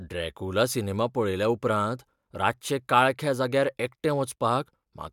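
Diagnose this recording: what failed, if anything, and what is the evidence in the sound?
Nothing in this speech recording stood out as a fault on listening.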